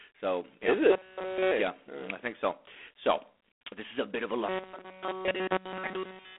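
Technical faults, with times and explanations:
Throughout: G.726 ADPCM at 24 kbit/s. Each sample is sent as a few bits of difference from an adaptive prediction. At this rate that is three bits, too few to follow the waveform closely. The leftover error rides on the speech as a harsh, rasping hiss. It grows and shrinks with the speech level. The band is telephone-narrow, roughly 300 Hz to 3.5 kHz. Nothing passes above 3.8 kHz, so the sound is dull and boxed in.
0.91–1.51 s, after "yeah is", and 4.49–6.39 s, after "a bit of a" and running to the end: robotic sound from repeated short buffers. The speech turns into a rigid, metallic buzz at 188 Hz. It still tracks the speech loosely. All of each stretch is roughly repeated material. The likely cause is new audio arriving too late, so the player loops the last fragment while real audio is skipped. A 188 Hz buzz fits a fragment of about 5.3 ms.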